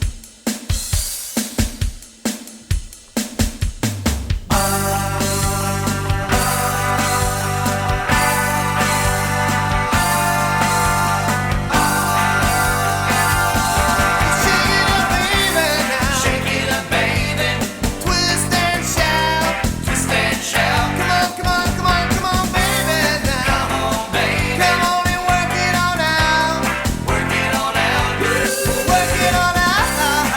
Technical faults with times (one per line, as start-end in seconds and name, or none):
none